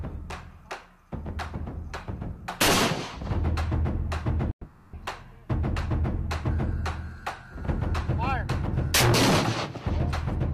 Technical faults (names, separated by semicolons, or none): long network dropout